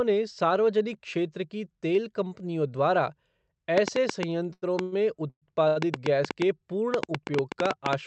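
From 3.78 s to the end, irregular ticks and pops ride over the speech and the pauses, about 5.6 per second and peaking around 20 dB above the signal. This train of clicks is likely interference from nearby equipment or a faulty connection or power supply injecting a repeated pulse.

At 4.53–4.64 s and 4.82–4.94 s, a sound is held too long with a slight buzz or dip, lasting 87 ms and 98 ms. Each is a short stall from a late packet: the jitter buffer ran empty, the receiver stretched the last sound, then resumed with nothing lost.

At 5.30–5.44 s, the sound trails off as a fading buzz or hiss and then drops to about 70 ms of silence before picking up where it stopped. This is a call audio freeze, likely from packets held up in transit, inserting a 117 ms gap without losing any audio.

At 5.68–5.78 s, another 84 ms held sound marks a further short stall from a late packet.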